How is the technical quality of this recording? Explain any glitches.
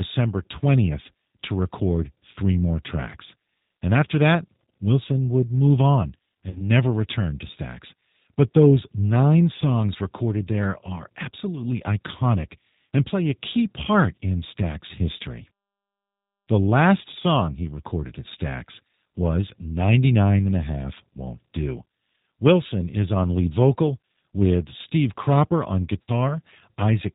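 The recording is clearly degraded: the whole clip carries coding damage, and two brief dropouts interrupt the speech.

Throughout, the speech sounds slightly rough and synthetic, with nothing above 4 kHz. That is the G.729 codec at work, which fits 8 kbit/s and rebuilds each 10 ms frame from a filter and pulses.

At 6.49 to 6.62 s, between "would move on" and "never return to", and again at 26.02 to 26.32 s, the speech smears into a fading buzzy tone or coloured noise. This is VoIP packet loss concealed by the speech codec. About 60 ms is missing each time, consistent with two lost packets, and the decoder extrapolated from its last frames while lowering the gain.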